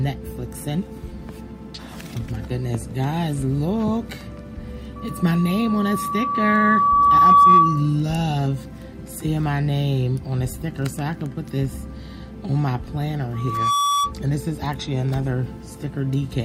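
A loudspeaker feedback squeal rises twice in this audio, both times as a single tone at 1.2 kHz. The first runs from 4.96 to 7.96 s, swelling over roughly two seconds until it sits about 15 dB above the program; the second, from 13.33 to 14.13 s, builds faster, in about 0.4 s, and peaks only about 5 dB over it. A microphone is hearing the speaker it drives, and at that frequency the loop gain tops one. A spectrogram would show a thin horizontal line brightening steadily, and the waveform a widening sinusoidal envelope.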